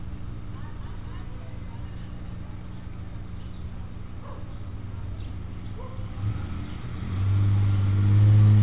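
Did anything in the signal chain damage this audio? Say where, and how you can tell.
No, nothing in the signal chain damaged this audio; it carries only the normal band limit of a G.711 mu-law call path at 64 kbps, with nothing above 4 kHz.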